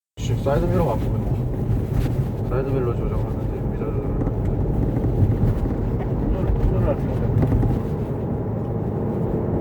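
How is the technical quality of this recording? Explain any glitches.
Listening closely, nothing in the recording stood out as a technical problem, so there are no glitches to explain.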